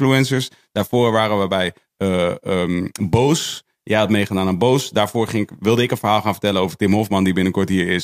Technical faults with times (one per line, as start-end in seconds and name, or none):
none